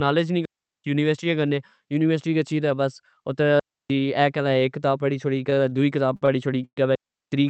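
At 0.45 to 0.84 s and again at 3.60 to 3.90 s, the speech drops into clean holes of near silence, about 0.39 s and 0.30 s long. These are digital wireless dropouts, where the receiver mutes after losing too much data. Unlike a freeze, nothing is stretched, and no noise burst marks either edge.

Between 5.54 and 6.29 s come four short stalls from late packets, at 5.54, 5.70, 6.16 and 6.26 s. Each holds the preceding sound for roughly 15 to 56 ms with a slight buzz or dip before the speech resumes where it left off. They are too brief to fade into silence the way a freeze does.

At 6.65 to 6.78 s a call audio freeze stretches the sound into a fading buzz or hiss for about 0.12 s, ending in roughly 70 ms of silence, likely because packets were held up and the jitter buffer emptied. The speech then continues with nothing lost, and the decay into quiet sets it apart from a dropout's sudden mute.

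A final digital wireless dropout silences 6.95 to 7.32 s, about 0.37 s, with the same clean edges as the earlier two. Throughout, the Opus call path limits the top end to around 8 kHz.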